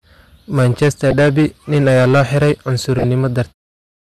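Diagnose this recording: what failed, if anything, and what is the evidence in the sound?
The speech is driven into the ceiling throughout, about 10 dB past full scale, so a small but steady share of the louder moments get their peaks sliced flat. That's hard clipping, most likely at a gain stage feeding the converter or a sample-format conversion with no headroom. The flat tops throw harmonics way up the spectrum, so every loud syllable picks up a gritty, fuzzy edge instead of the odd crackle. It stays there all the way into the smooth fade-out near 3.5 s.

Two short bursts sit on top of that. There's a blip from 1.11 to 1.13 s, and a longer one from 2.98 to 3.04 s, just after "ayaa loo xiray". Both are fairly loud, which is the signature of a corrupt frame decoded: damaged bits in the compressed stream that the decoder played anyway, putting energy in the wrong bands. The lengths point to one bad frame, then a short run of them, somewhere in storage or transmission.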